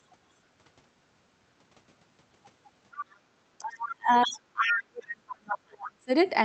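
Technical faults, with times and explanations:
2.93–3.17 s, 3.64–3.92 s, 4.21–4.29 s and 4.69–4.73 s: other side's voice leaking through. A second voice sits under the talker. It starts around 15 dB down, and the last scrap is only about 5 dB down. This is likely loudspeaker playback that the echo canceller failed to remove from the microphone signal.
3.22–3.30 s: background gated by the echo canceller. The room sound falls by about 13 dB for well under a tenth of a second, then comes back. The canceller clamped the microphone hard against loudspeaker playback and released it once that playback stopped.
3.58–3.65 s and 3.92–6.10 s: speech suppressed in double talk. The talker first dips briefly by roughly 15 dB. Then, for about two seconds, the voice sinks as far as roughly 35 dB. This is likely because both sides spoke at once and the canceller turned the talker down along with the echo.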